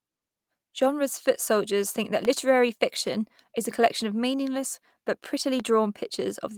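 Loud pops at 2.25 to 2.27 s, between "foot soldiers think that" and "fiction is a collection", and at 5.60 to 5.62 s, just after "collection of meaningless but". Each is a single sharp click roughly ten decibels above the speech, which continues underneath. The likely cause is a brief voltage spike, from a switch, static or a driver glitch, entering the signal path.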